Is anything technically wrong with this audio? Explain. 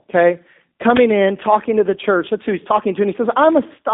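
Yes, there are two problems. G.729 codec throughout: the speech is rebuilt from a vocal tract model and sparse pulses, fitting 8 kbit/s, so it sounds rough and synthetic within a 200 Hz to 3.6 kHz band. Uninitialised buffer at 0.97 s, just before "in talking to the": a 5 ms block played before audio was written to it, giving a short, loud crack.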